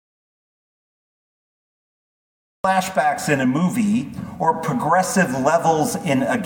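From the very start until 2.64 s the clip is dead silent. This is an audio dropout to silence, already under way when the clip begins. The silence is total, with no room tone or hiss beneath it. The input was likely lost through a disconnected device, a failed link or a mute, while recording carried on writing silence. At 2.64 s the sound cuts in abruptly, mid-flow. Whatever happened before that point is missing.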